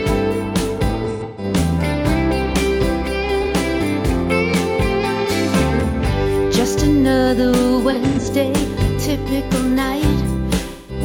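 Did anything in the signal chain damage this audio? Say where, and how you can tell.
Yes. Smeared, noisy, phasey patches appear at 1.03–1.44 s, 3.42–3.47 s, 7.90–8.27 s and 10.68–11.0 s, the first and third broken into scattered bursts. This is AAC frame loss with concealment at the codec stage: the decoder rebuilt missing frames from the last good spectrum.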